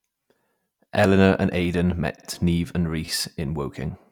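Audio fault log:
1.65 and 3.05 to 3.08 s, repeated buffer: Each spot gives a tiny buzzing stutter, a click-like flutter rather than an audible echo of the sound. At 1.65 s one short piece plays twice; at 3.05 s the same piece plays three times in a row. The playback device ran dry and replayed its last block, about 11.6 ms long, which fits a 512-sample buffer. Each repeat meets the next with a hard join, and nothing is skipped afterwards.
2.16 to 2.26 s, repeated frames: A stutter, with the same fraction of a second heard again. A block of about 52 ms, which fits a pair of compressed frames, was written or sent more than once and played two extra times. The decoder faithfully plays the duplicates, so the sound is stretched by about 0.1 s.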